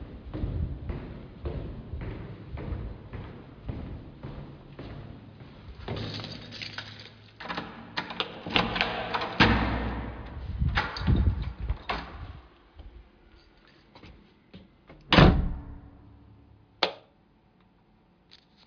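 No technical faults can be heard anywhere in this recording.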